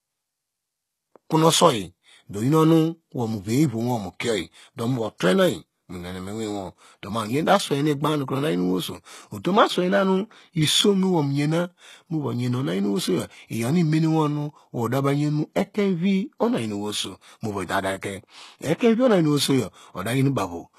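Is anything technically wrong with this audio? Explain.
Yes. Throughout the speech, the treble sounds synthetic and gritty, with plainly audible damage and nothing above 12.3 kHz. This is likely HE-AAC compression at a bitrate around 16 kbps: the upper band is rebuilt from copied lower bands, so s sounds turn lispy and metallic rather than simply dull, as a plain low-pass would leave them.

At 18.78 to 18.81 s there is pre-echo. Quantisation noise spread across the transform block fills the quiet moment before a sharp attack, giving about 28 ms of hiss ahead of it and a softened onset. Because the hiss comes before the attack, not after, it is not reverb or a dropout.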